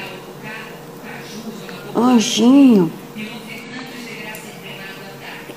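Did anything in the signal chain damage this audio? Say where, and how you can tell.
Yes. Repeated frames at 1.07 s and 3.63 s: a 46.4 ms block plays twice, a brief stutter. This points to the codec or storage stage, where one compressed frame was written or delivered again, adding 46.4 ms each time.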